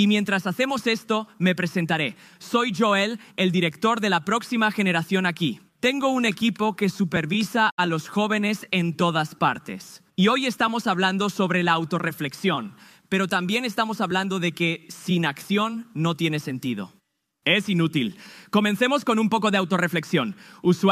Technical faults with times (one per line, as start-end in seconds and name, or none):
7.71-7.80 Bluetooth dropout